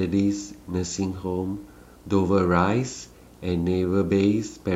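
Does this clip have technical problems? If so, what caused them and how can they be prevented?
Yes. Running under the speech for the whole clip there's video or display buzz: a steady 60 Hz buzz with a layer of hash sitting above it, roughly 30 dB below the speech. That rate matches a picture's field rate. A monitor, or a video cable running alongside the audio lines, is coupling its refresh energy into the signal path. To prevent it, keep audio cabling away from screens and video leads and use balanced, properly grounded connections.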